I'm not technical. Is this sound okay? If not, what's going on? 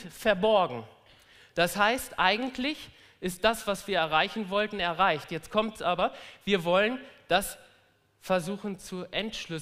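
Yes, there are no faults.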